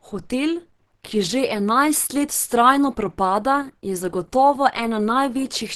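Speech run through a likely Opus compression stage in hybrid mode at a rate that sounds near 16 kbps; the clip is muffled and hoarse throughout, with nothing above 12 kHz.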